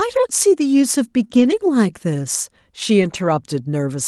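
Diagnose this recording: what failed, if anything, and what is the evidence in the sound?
Network loss, patched by Opus in-band error correction. Lost packets were rebuilt from low-bitrate copies at 1.23–1.25, 1.31–1.57 and 3.01–3.27 s, so the audio gets rougher and noisier without gaps.

There's also a short concealed packet loss at 1.27–1.31 s, a network dropout. The decoder continued the previous sound to cover the missing 20 ms, giving a brief smear.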